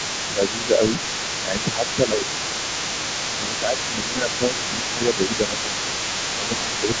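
A speech recording carries a mains buzz for its whole length, a raspy tone built on 50 Hz and its harmonics at about 20 dB below the speech. Its rasp sets it apart from a smooth hum: sharp switching spikes, twice per mains cycle, feed energy into the upper harmonics. Under the main talker, a second voice runs from 0.0 to 7.0 s at roughly 10 dB down. This is the other side's voice leaking through, likely loudspeaker sound that the echo canceller failed to subtract, which makes it distinct from crosstalk on the line. The main voice also sinks by around 5 dB during 0.3–0.82 s, 1.43–2.64 s, 3.39–6.03 s and 6.36–6.89 s, speech suppressed in double talk. The likely cause is the canceller ducking everything while both sides spoke, and the dips follow the overlaps, unlike steady gain pumping. The missing content above 8 kHz comes from normal call microphone processing.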